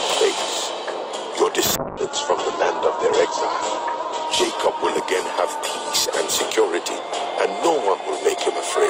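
A call bitrate drop runs from 1.76 s to 8.11 s. The audio turns coarse and muffled as the bandwidth narrows from 20 kHz to 8 kHz. It is roughest for about 2.3 s, which suggests a fall from around 128 kbps to near 9 kbps.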